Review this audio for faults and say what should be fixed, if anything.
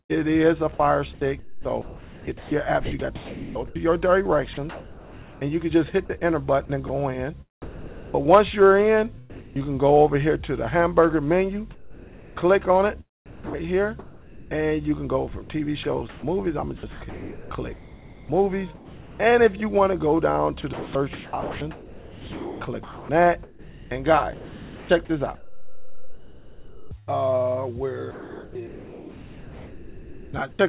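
Sound chopped by the voice detector, 1.13 to 9.59 s, 15.83 to 19.19 s and 20.73 to 30.59 s: the audio repeatedly cuts to flat synthetic noise and back, about 3.1 s, 1.7 s and 6.6 s of replaced sound respectively. This is likely a voice detector gating transmission on and off, with comfort noise filling each gap.

Comfort noise in place of the background, 11.75 to 14.51 s: for about 1.4 s within this span, the real background gives way to a steady, featureless hiss with none of its original texture. The sender likely stopped transmitting and the receiver generated substitute noise roughly matching the background's level and spectrum.

Sound dropped by the voice detector, 13.26 to 13.54 s: about 0.15 s of actual sound disappears into comfort noise, with 0.28 s replaced in total. A quiet passage was likely classified as background, so transmission halted until the detector retriggered. In all three cases the band stops at 4 kHz, consistent with a narrowband call codec.

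To prevent these faults, disable discontinuous transmission on the sender, or lower the voice detector's threshold and lengthen its hangover time so quiet passages stay above the gate.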